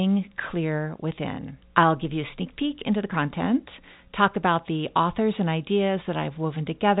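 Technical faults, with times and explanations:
No faults; the speech sits within the usual G.711 telephone band, with nothing above about 3.8 kHz.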